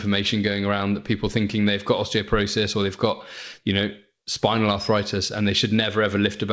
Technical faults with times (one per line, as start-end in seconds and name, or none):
none